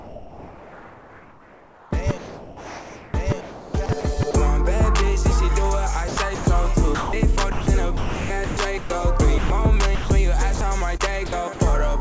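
The sound keeps dropping out and being patched with synthetic noise across 0.00 to 4.34 s (about 3.3 s of it replaced) and again from 6.08 to 11.59 s (about 1.6 s replaced). This is sound chopped by the voice detector, likely switching transmission off and on, with comfort noise filling each gap. The whole clip stops at 8 kHz, which fits a wideband call codec such as G.722.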